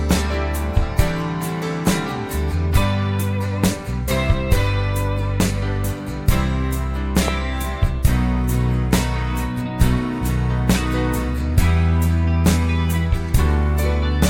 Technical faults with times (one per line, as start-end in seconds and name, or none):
7.28-7.30 loud pop